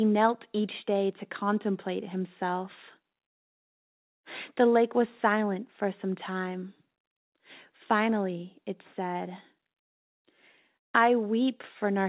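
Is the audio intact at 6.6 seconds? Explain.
Yes, the speech at 6.6 seconds is intact, carried through the WebRTC call path as normal, with the narrow band of a telephone-grade codec leaving nothing above 4 kHz.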